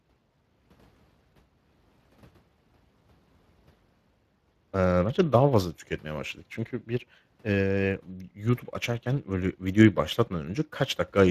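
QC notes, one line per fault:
throughout, Speex codec: the speech carries plainly audible coding damage, a grainy, hoarse texture in place of a clean tone. Speex is a CELP codec that models the voice with a predictive filter plus a coded excitation signal, and the error left in that excitation is heard here as roughness laid over the voice. The level of damage fits a mid-range setting of around 22 kbps. Nothing is present above 15.3 kHz.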